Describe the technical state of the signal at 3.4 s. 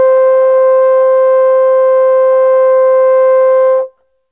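At 3.4 s the music plays through intact, with no dropout, click, distortion or other fault to be heard.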